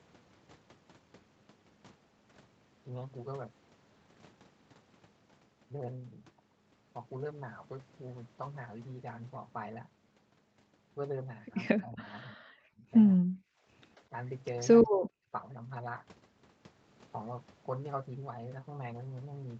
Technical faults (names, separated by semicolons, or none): speech suppressed in double talk